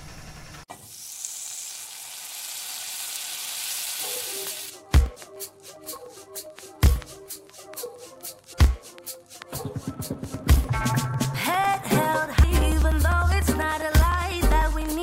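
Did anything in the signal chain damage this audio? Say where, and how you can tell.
Yes, codec stage: damaged data in the compressed stream. Quick blips at 8.52 s and 12.43 s, where the decoder choked on bad frames and resynced.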